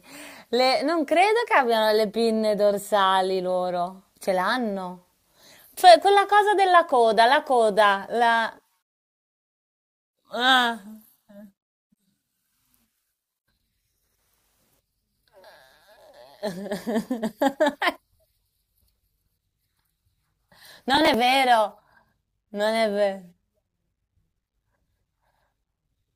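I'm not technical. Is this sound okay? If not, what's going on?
No. From 20.95 to 21.14 s there is a short burst of processor overload crackle. The computer was too busy to deliver each small slice of audio on time. About ten slices, each roughly 10 ms, were skipped, leaving a gritty tearing in the speech.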